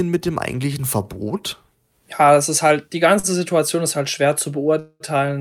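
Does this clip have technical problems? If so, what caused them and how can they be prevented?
Yes. There are two faults in this speech clip.

The first is a short stall from a late packet, from 3.19 to 3.27 s, right after "das ist halt die". A packet arrived late and the jitter buffer ran dry. The receiver held the last sound for about 41 ms until the packet came. Playback then resumed where it stopped. Nothing is lost, but the sound drags briefly and everything after runs 41 ms late. A slightly deeper jitter buffer would absorb a delay this small.

The second is a call audio freeze, from 4.80 to 5.03 s, just after "ist halt schwer". The sound stops moving forward, and a fading buzz or hiss stretches the last sound for about 205 ms, including about 40 ms of silence. Then the speech carries on with nothing missing, now about 205 ms behind. This most likely comes from packets held up in the network and the jitter buffer emptying. 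A more stable connection, or traffic prioritisation for call audio, would help prevent it.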